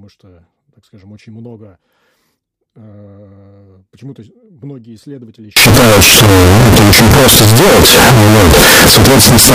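From 5.57 s, right after "многие исследователи", to the end, the speech turns into a blast of very loud, harsh distortion, and the quiet gaps become as loud as the rest. This points to signed and unsigned mixed up, likely from 16-bit samples read with the wrong sign convention, so the top bit flips and every zero crossing leaps across the full range. Ordinary clipping only flattens peaks and leaves quiet passages quiet.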